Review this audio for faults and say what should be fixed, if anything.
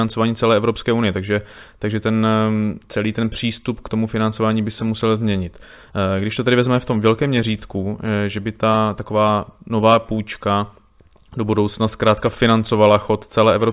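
Nothing to fix: no faults are audible anywhere in the speech.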